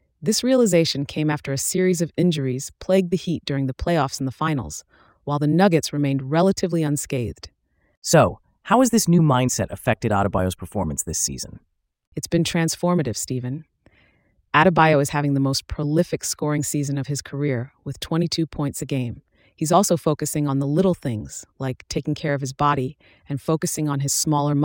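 Nothing stood out on listening to the speech here.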